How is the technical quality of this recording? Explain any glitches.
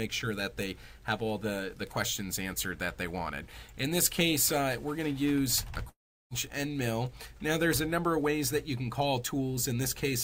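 The recording has one glitch, a long network dropout from 5.89 to 6.33 s. The likely cause is that audio stopped arriving over the connection for a stretch. The receiver filled the gap for about 410 ms by stretching the last sound it had into a fading buzz or hiss, and about 360 ms of that span is silence. When sound resumes, roughly 420 ms of the original audio is gone, so it picks up further along.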